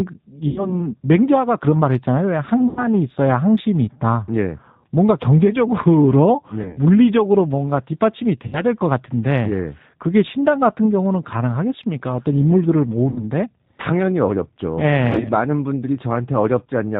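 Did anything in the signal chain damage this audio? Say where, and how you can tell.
Yes. At the codec stage, G.729 codec compression runs throughout: nothing above 4 kHz, with a rough, synthetic timbre from pulse-coded excitation rather than the clean dullness of simple band-limiting.

At the network stage, VoIP packet loss is concealed by the speech codec at 0.48–0.85, 2.69–2.88, 6.63–6.78, 8.47–8.62, 13.10–13.26 and 15.13–15.29 s. The sound stretches into a fading buzzy tone or coloured noise and stays weak or distorted briefly after, rather than dropping to silence or clicking as a plain dropout would.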